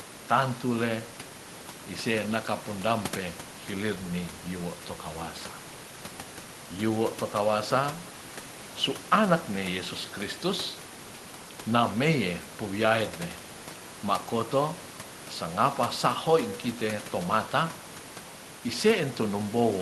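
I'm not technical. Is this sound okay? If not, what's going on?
Yes, there's nothing wrong with this sound.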